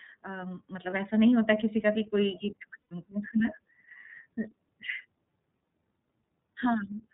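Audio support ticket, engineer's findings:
iLBC codec, whole clip. Bandwidth stops at 4 kHz, so the speech is thin and slightly rough and synthetic, plainly audible throughout. Each frame's excitation is coded on its own. The sound fits the 13.33 kbps mode with 30 ms frames.

Lost iLBC frames, 0.90–0.93 s. Short buzzy smear, about the length of one 30 ms frame. The decoder repeated the last pitch cycle with some noise, and the voice snaps back clean right after.

Lost iLBC frames, 2.83–2.91 s. Longer held, breathy vowel that fades out, about 90 ms, likely three frames in a row. Same concealment, and it recovers almost instantly because the frames stand alone.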